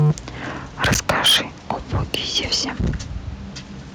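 Speech, with harsh, crackly, flattened peaks at 0.0–0.12 s, 0.83–1.37 s and 1.7–2.96 s. That's likely microphone overload, pushing the converter about 8 to 16 dB past its ceiling.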